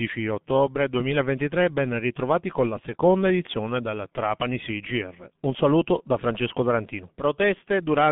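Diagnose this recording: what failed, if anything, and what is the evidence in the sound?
The failure is at the codec stage: the speech has been through the G.723.1 codec for its whole length. Nothing reaches above 3.6 kHz, and the band sits at roughly 150 Hz to 3.5 kHz, so the sound is muffled. It is also hoarse, with smeared consonants. Band-limiting alone would only dull the sound. The added roughness comes from a coarse voice model refreshed only every 30 ms, consistent with heavy coding at around 6 kbit/s.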